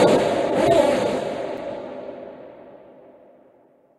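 At 1.57 s a block of digital silence drops in for about 6 ms: most likely the output buffer was not filled in time, so the sound cut out. The hard edges make it a single tick, unlike a faded dropout, which leaves a softer, smoothed gap.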